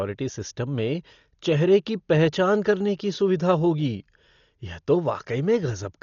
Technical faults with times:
0.00-6.02 Dolby Digital compression

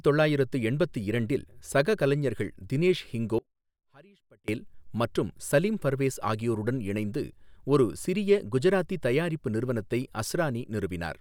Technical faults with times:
3.39-4.48 audio dropout to a faint residue

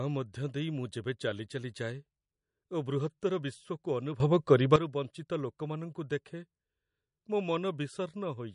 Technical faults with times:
0.00-8.54 MP3 compression
4.20-4.76 sudden gain jump

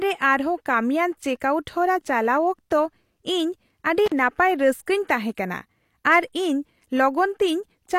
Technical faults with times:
4.06-4.12 intermittent contact

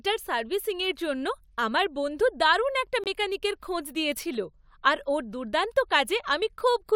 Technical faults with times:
3.04-3.07 corrupt frame muted

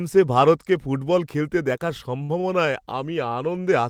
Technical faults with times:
2.23-2.46 short stall from a late packet

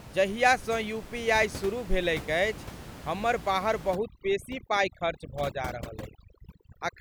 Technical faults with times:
3.95-7.00 overdone noise removal

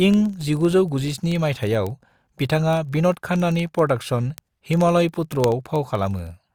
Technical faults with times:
0.14-6.54 word clock ticks

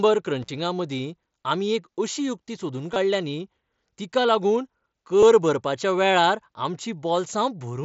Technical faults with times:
0.42-0.48 intermittent contact
2.94-2.96 concealed Bluetooth headset packet loss
5.20-5.23 concealed Bluetooth headset packet loss

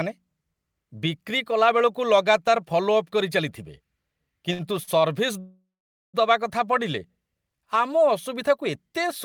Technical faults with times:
4.53-4.89 short stall from a late packet
5.39-6.15 call audio freeze

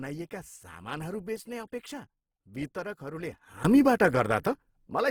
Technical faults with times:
0.00-5.11 Opus compression
3.65-5.11 sudden gain jump

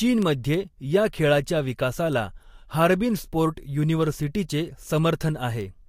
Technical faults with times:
0.22-5.61 word clock ticks

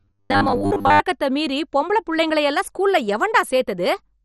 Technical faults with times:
0.00-4.24 MP2 compression
0.01-1.00 robotic sound from repeated short buffers

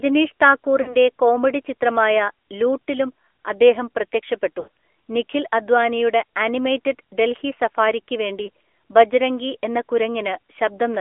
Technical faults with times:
0.00-11.01 AMR narrowband mobile codec
0.82-0.95 lost AMR speech frames
4.60-4.68 lost AMR speech frames
8.46-8.49 lost AMR speech frames

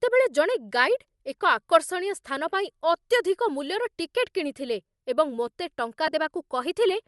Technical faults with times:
0.00-7.08 Bluetooth LC3 compression
6.07-6.13 lost LE Audio frames

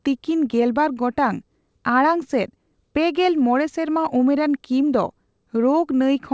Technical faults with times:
0.00-6.33 clock drift between sender and receiver
0.07-6.16 repeated timing corrections

